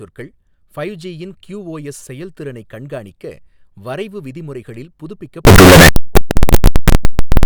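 A likely signed and unsigned mix-up, flipping the top bit of 16-bit samples, turns every zero crossing into a full-range jump from 5.45 s after "செயல்திறனைக் கண்காணிக்க வரைவு விதிமுறைகளில்" to the end: harsh, very loud distortion with quiet moments as loud as the rest.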